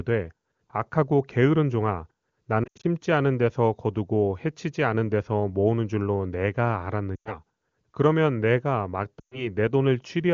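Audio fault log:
2.63–2.86 s, 7.16–7.37 s, 9.19–9.49 s: lost AMR speech frames. Checksum failures forced concealment of 140, 100 and 120 ms, with speech fading to near silence in the first event's 80 ms run, then returning weak.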